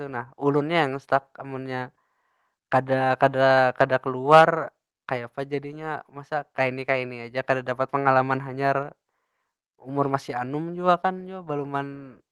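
From 4.32 to 4.43 s the loudest stretch of speech turns harsh and crackly, its peaks sounding flattened and gritty rather than rounded. This is microphone overload, likely caused by the input volume being set so high that the signal ran about 5 dB past the converter's ceiling. The tops of the waveform were sliced off, with a small but noticeable portion of the samples in that stretch pinned at the limit, and that squaring-off is what produces the crackle.

At 4.41 s, right inside that distorted burst, the speech and the background both drop slightly in level all at once. This sounds like the microphone volume stepped down, likely by the call software reacting to the clipping and lowering the device's input gain by about 2 dB in a single move. Because the adjustment lands on the overloaded peak, the loudness shift arrives together with the crackle. The gentle coding texture and the top end that stops around 12 kHz throughout fit a low-bitrate Opus call path.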